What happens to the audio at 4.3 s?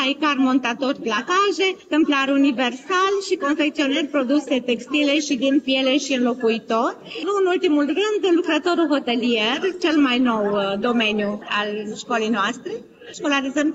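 Nothing goes wrong at 4.3 s; the audio plays through that moment intact, with no dropout, click or other fault.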